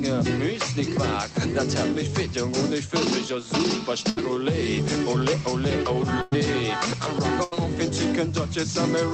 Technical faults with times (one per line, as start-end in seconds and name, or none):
4.09-4.18 burst of packet loss
6.22-6.34 burst of packet loss
7.44-7.53 burst of packet loss